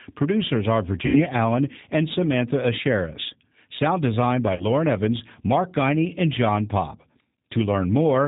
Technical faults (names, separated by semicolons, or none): G.729 codec; VoIP packet loss concealed by the speech codec